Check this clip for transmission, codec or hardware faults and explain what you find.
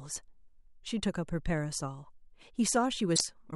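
One codec fault is present. Damaged data in a compressed stream occurs from 3.12 to 3.21 s: corrupted bytes break the decoder's frame sync, so it discards the bad stretch and hunts for the next valid header, producing a brief 80 ms glitch in the speech.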